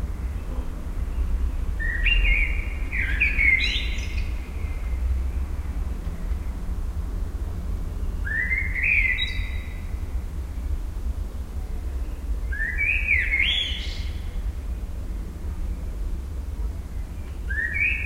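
The clip is a recording of sounds, and nothing is technically wrong with it.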